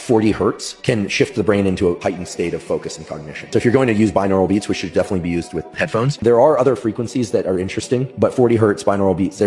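No technical faults can be heard anywhere in this clip.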